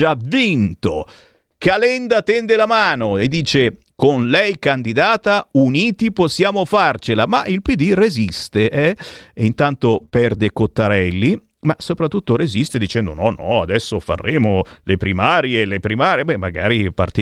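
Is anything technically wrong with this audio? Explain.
Yes. Around 10 s the speech passes through a short run of network packet loss, handled two ways.

Lost packets rebuilt from error correction, from 9.93 to 10.03 s (60 ms) and from 10.14 to 10.16 s (20 ms). The decoder played low-bitrate copies carried in the following packets, so there are no gaps, but these stretches sound rougher and noisier.

Short concealed packet loss, from 10.05 to 10.09 s and from 10.09 to 10.14 s. With no copy available, the receiver extended the preceding sound to fill each hole, producing a brief smear or wobble.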